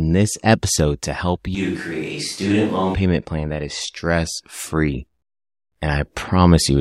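At 1.55 s, right after "this episode to help", the speech suddenly turns roomy and hollow, loses bass, drops roughly 5 dB, and gains a room-noise floor about 30 dB below the speech. At 2.94 s it snaps back, just before "plan that is stress". This is likely a switch to a distant microphone, with the close mic's feed dropping out. Added reverb alone would not also raise the background noise and thin the low end in the same instant.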